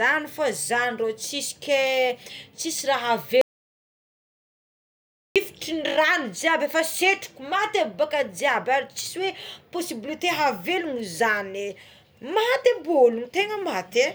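At 3.41 s the speech cuts off mid-flow. The track falls to silence until 5.36 s, a gap of about 1.94 s. No room tone or hiss remains underneath. The speech then resumes abruptly. This is an audio dropout to silence. The input most likely lost its signal for a moment, while the recorder kept writing silence. Whatever was spoken in that span is gone from the recording.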